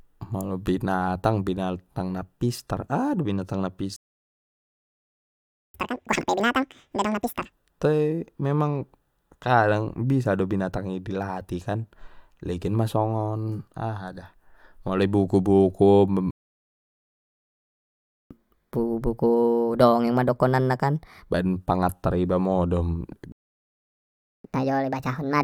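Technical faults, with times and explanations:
3.96–5.74 s: playback stall. The speech stops mid-flow for about 1.78 s, likely because the player ran out of buffered data, then resumes.
5.74–7.52 s: catch-up at higher speed. The backlog plays at double speed, so pitch jumps roughly ten semitones until the lost time is regained.
16.31–18.31 s: playback stall. The output drops to silence for 2.0 s, likely from a starved buffer, before picking up where it stopped.
18.31–21.31 s: catch-up at higher speed. The audio runs 1.25 times fast, raising pitch by about four semitones, then settles back to normal.
23.32–24.44 s: playback stall. Speech halts for about 1.12 s, likely a blocked or underfed playback thread, then continues.
24.44–25.44 s: catch-up at higher speed. The backlog plays 1.5 times fast, lifting pitch around seven semitones, and the clip ends before it returns to normal.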